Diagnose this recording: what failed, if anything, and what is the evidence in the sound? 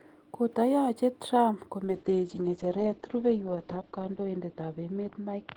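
From 1.85 s to the end, the speech turns muffled and rough, losing its top end as the audio band narrows from 20 kHz to 8 kHz. It stays at its worst for about 2.3 s and never recovers. This is a call bitrate drop at the network and codec stage. The call's bandwidth estimate fell, so the Opus encoder was told to code far more coarsely, consistent with a fall from about 40 kbps to 8 kbps. At that rate it also discards the high frequencies.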